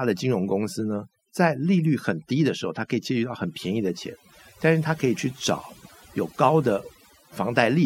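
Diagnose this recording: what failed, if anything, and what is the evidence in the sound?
The failure is overdone noise removal, a call-processing stage where a suppressor was set far too aggressively for this noisy speech. Throughout the clip the background collapses to near silence dotted with twinkling specks. The suppressor pulls individual frequency bands down hard whenever they sit near its noise estimate, taking quieter voice detail with them. On a spectrogram this shows as isolated flickering dots between phrases and ragged, gappy harmonics.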